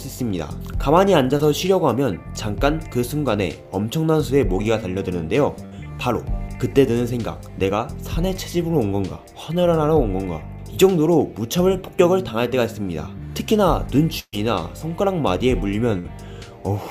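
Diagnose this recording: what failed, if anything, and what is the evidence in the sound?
A short concealed packet loss in the network path shows at 1.37 to 1.41 s as a brief smear. About 20 ms of audio never arrived in time, and the receiver extended the preceding sound for roughly 17 ms before crossfading back into the received stream.

Three bursts of packet loss, also network-side, occur at 5.65 to 5.73 s, 14.19 to 14.35 s and 15.99 to 16.06 s, dropping about 60, 140 and 60 ms. Concealment held and faded the last sound. The long middle gap decays into 50 ms of silence before the audio resumes.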